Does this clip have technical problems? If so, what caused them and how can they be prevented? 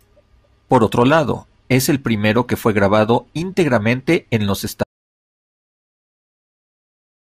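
Yes. An audio dropout to silence begins at 4.84 s, right after "grabado íntegramente en los", and lasts to the end: the speech cuts off mid-phrase into silence with no room tone. The waveform flattens and the spectrogram goes blank, which points to a likely lost input while recording continued. Securing cables and links, and monitoring input levels during capture, would prevent it.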